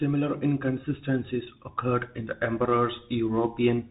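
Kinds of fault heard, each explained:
Bluetooth CVSD headset codec: The speech carries the plainly audible damage of CVSD, the narrowband headset codec, which fits its 64 kbps one-bit stream. Each sample only steps up or down with an adaptive step, so fast loud changes outrun it and smear, s sounds turn scratchy, and a granular hiss sits underneath. A spectrogram shows a hard ceiling near 3.8 kHz with a grainy noise floor below it, and the waveform shows slope-limited, staircase-like edges.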